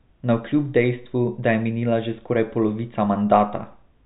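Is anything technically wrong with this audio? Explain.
No, nothing is technically wrong with this audio.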